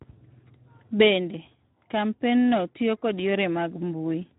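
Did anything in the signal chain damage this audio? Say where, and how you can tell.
Yes, at the codec stage. Speex codec damage runs throughout the speech, which sounds hoarse and grainy, consistent with a low setting near 11 kbps. Too few excitation bits leave a noisy residue, so a spectrogram shows blurred, speckled harmonics rather than clean striations.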